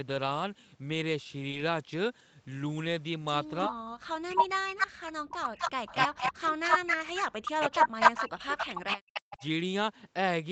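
From 3.67 to 7.16 s the speech keeps ducking, around 3 s of it in total, sometimes by as much as 40 dB, so it thins out or drops away in pieces. That's speech suppressed in double talk, most likely because the far end was talking at the same time and the echo canceller couldn't tell this talker from its own loudspeaker echo, so it pulled everything down. It comes back from 7.49 to 9.42 s, with about another 1.5 s of the speech chopped the same way.

Layered over that is an echo leak: a copy of the speech trailing 248 ms behind the original. First there's a short scrap at 4.36 to 4.43 s, then longer stretches from 4.79 to 6.32 s and from 6.64 to 9.47 s. It sounds like a second, slightly late copy of a voice. The likely cause is a speakerphone on the other end whose echo canceller didn't scrub all of what its mic picked up, so the remainder got sent back.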